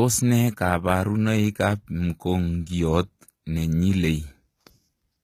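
A speech recording that has most likely been through HE-AAC compression at a low bitrate, around 20 kbps judging by the damage, for its whole length. The lower band carries the real signal, while the treble is rebuilt by spectral band replication from copied lower bands under a coarse envelope, so it sounds bright but synthetic. Sibilants come out gritty and lispy, the codec damage is plainly audible throughout, and nothing remains above 14.9 kHz.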